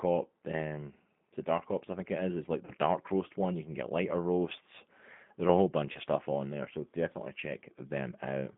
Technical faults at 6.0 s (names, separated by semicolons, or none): G.729 codec; VoIP packet loss concealed by the speech codec